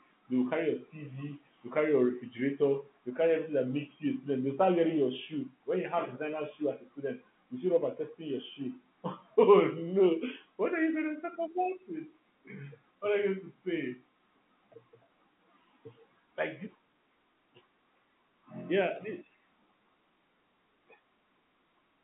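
No faults are audible anywhere in this speech recording.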